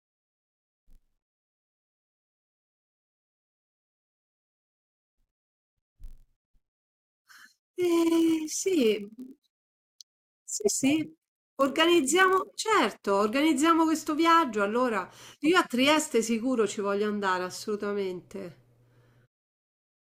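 From the start to 12.6 s, a block size mismatch (padded) leaves each 1024-sample block read downstream slightly short, with the remainder zero-filled. Those tiny gaps produce a buzz at about 43.1 Hz, and the speech runs barely slower, at 0.999 speed.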